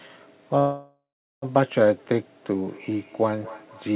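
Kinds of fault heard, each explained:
Call audio freeze: Packets were likely held up in transit, so the receiver's jitter buffer ran dry and it had to improvise. From 0.59 s to 1.45 s the last sound is stretched into a fading buzz that sinks to near silence for roughly 0.39 s of the gap. The audio then resumes exactly where it broke off. Nothing is lost, but about 0.83 s has been inserted and everything after arrives that much later.
Feedback echo between two devices: Two devices in the same room share the call, and one plays back what the other's microphone sent. That microphone hears it again, and neither echo canceller can remove sound from the other device. From 2.54 s to the end, the speech returns at a steady interval of about a fifth of a second. The repeats are thin and ringing, peaking about 22 dB below the speech, in a band that stops at 4 kHz.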